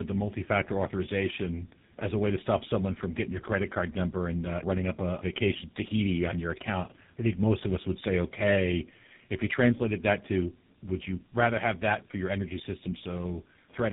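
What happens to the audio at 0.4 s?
At 0.4 s the speech carries tandem speech coding, present across the whole clip: it sounds as if an AMR-NB coder ran first and then GSM full rate re-encoded its damaged output, with nothing above 3.8 kHz. That added roughness and warble marks it apart from a single low-bitrate codec.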